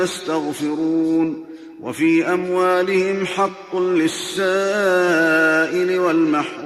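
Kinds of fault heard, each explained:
No technical faults can be heard in this clip. There is nothing to list under any kind of fault.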